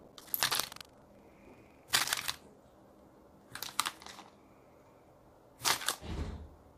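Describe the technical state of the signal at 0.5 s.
At 0.5 s you're right in the buffer tearing, which runs from the start to about 2.37 s. The writer and reader have slipped, so roughly 15% of each period replays audio from about 150 ms earlier. That gives a rattling buzz near 23.4 Hz, which fits a 2048-sample buffer.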